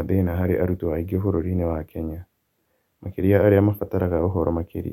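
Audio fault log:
Nothing stood out on listening to the speech in this recording.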